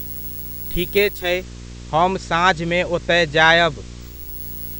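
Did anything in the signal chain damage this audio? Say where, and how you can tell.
Yes. Throughout the clip a steady buzz sits under the speech at 59.94 Hz, with gritty hash above it and a whistle at 15.7 kHz. It is loud, only around 10 dB below the speech. This is video or display buzz entering at the analogue wiring stage. A screen or video cable is coupling into the audio path, imposing the picture's field rate as the buzz and its horizontal line rate as the high tone.

From 0.98 s to 4.47 s a hiss roughly 30 dB under the speech rises, while the loudness stays the same. The changeover is a smooth 465 ms fade rather than a cut. This is digital radio blending to analogue in the reception stage. The hybrid receiver lost its digital stream and cross-faded to the station's FM broadcast, whose noise floor accounts for the hissy stretch.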